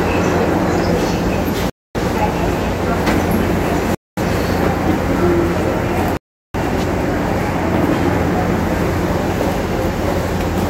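Three rebuffering stalls interrupt the sound, at 1.70–1.95 s, 3.95–4.17 s and 6.17–6.55 s, adding about 0.25 s, 0.23 s and 0.37 s. Each time the player exhausted its downloaded audio, fell silent while waiting for data, then resumed exactly where it stopped, losing nothing but stretching the timeline.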